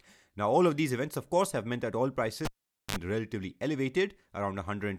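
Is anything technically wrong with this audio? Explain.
Yes, there is one fault. Just after "have meant that oil", from 2.45 to 2.96 s, a cable is pulled and plugged in while live. A pop opens about 0.46 s of near silence, then a 54 ms burst of 50 Hz mains buzz as only the plug tip makes contact, and a second pop as the speech returns. On a waveform this looks like a spike, a flat line, a dense hum block, then another spike. On a spectrogram it shows as two vertical broadband streaks around a dark gap, with a short stack of 50 Hz harmonics near the end.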